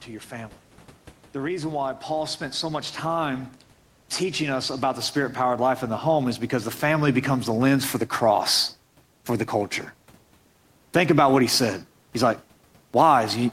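From 4.18 s to 7.76 s the level climbs steadily, the speech and the faint room noise behind it swelling together by about 8 dB over roughly three and a half seconds. This is automatic gain rising: the automatic gain control judged the input too quiet and kept pushing its gain upward, so the background, which sits about 35 dB under the speech, is lifted along with it rather than the voice alone.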